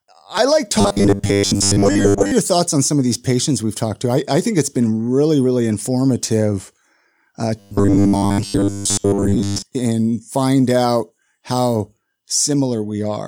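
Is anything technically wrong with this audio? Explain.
Yes. Twice, from 0.81 to 2.32 s (after "I like", before "your thoughts on some") and from 7.59 to 9.64 s (before "and find out how"), there is robotic sound from repeated short buffers. Audio likely arrived too seldom, so a roughly 10 ms buffer was replayed over most of each stretch, imposing a rigid 100 Hz metallic buzz.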